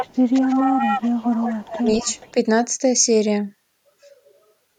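From the start to 2.32 s, a second copy of the speech trails the first by about 194 ms and sits only around 5 dB below it. This is an echo leak, likely from a far-end loudspeaker whose echo canceller let its own pickup return down the line. Unlike room reverberation, it is a distinct, separate repeat rather than a smooth decay.

Within that stretch come brief dips of speech suppressed in double talk: at 0.41 to 0.49 s, by roughly 5 dB; at 1.81 to 1.87 s, the deepest, by roughly 10 dB; and at 2.03 to 2.07 s, again roughly 5 dB. Each is a short duck, likely an echo canceller turning down the talker along with the echo while both sides overlap. Unlike a packet-loss dropout, the level drops partway rather than falling to silence.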